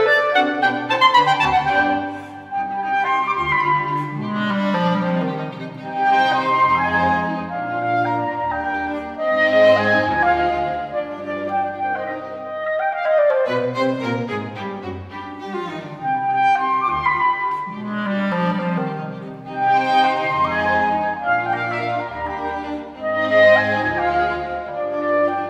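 Nothing stood out as a technical problem on listening to this recording.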